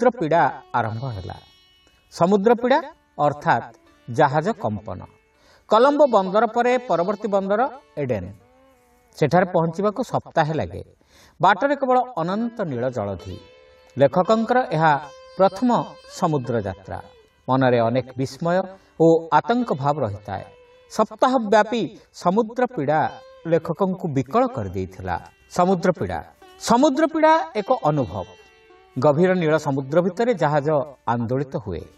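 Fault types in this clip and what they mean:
Corrupt frame concealed: damaged data in the compressed stream was caught by the decoder, which patched the gap on its own rather than letting garbage through. At 18.61 to 18.64 s the decoder covers a brief span of about 38 ms, a length that fits two lost frames. A spectrogram shows a thin vertical band of faded or smeared energy.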